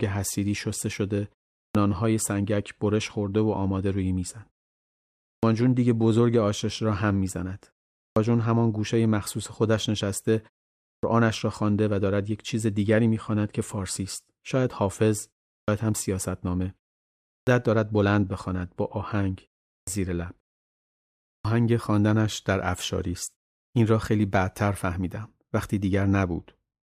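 Speech with a clipped start after a pause at 1.62, 5.31, 8.04, 10.91, 15.57, 17.36, 19.76 and 21.34 s. After silences of 0.32 to 1.02 s, the output path takes time to wake, so each phrase loses roughly 106 to 128 ms of its onset and begins abruptly.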